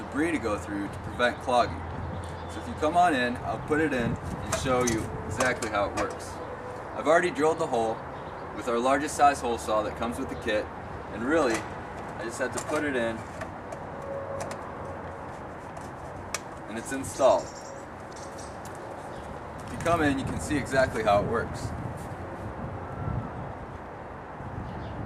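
At 18.10 to 18.16 s, two neighbouring blocks of about 32 ms each, which fits single swapped frames, play in the wrong order: frames out of order. It gives a brief garbled flutter. Unlike a dropout or repeat, no time is lost or duplicated.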